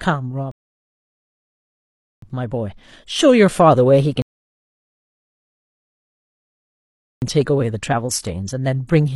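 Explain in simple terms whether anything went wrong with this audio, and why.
Rebuffering stalls occur twice: from 0.51 to 2.22 s, and from 4.22 to 7.22 s. Each time, the speech drops into silence, about 1.7 s the first time and 3 s the second, then picks up exactly where it left off. The player had used up all the audio it had downloaded and had to wait for more to arrive before continuing. No speech is lost, but the pauses stretch the clip out.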